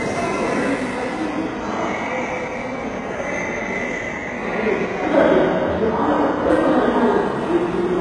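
Everyday sounds here, with heavy HE-AAC compression damage throughout: treble rebuilt as gritty, metallic copies, nothing above 11.4 kHz, likely from a starved bitrate around 12 kbps.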